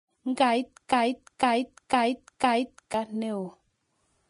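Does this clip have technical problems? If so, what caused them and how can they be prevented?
Yes, two problems. The whole clip sounds like low-bitrate audio saved at a high bitrate: it's an MP3 at 256 kbit/s, but nothing exists above 10.6 kHz and the speech still carries the artefacts of an earlier low-bitrate encode. That points to a likely earlier pass through something like a 32 kbit/s Vorbis encode that threw the top end away, and re-encoding at a generous bitrate just preserved the damage. To prevent it, always encode from the original uncompressed source rather than from an existing lossy file.

From 0.93 s to 2.94 s there's a broken-record loop: a 0.5-second fragment plays four times back to back, identical each pass, so the sound seems to stick and stutter for about two seconds. What should have played in that stretch is simply gone. It's likely that the player, encoder or stream stalled and kept resending the last chunk it held in its buffer. 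To prevent it, give the capture or streaming chain enough buffering and CPU headroom, and have it output silence rather than repeat stale data when it underruns.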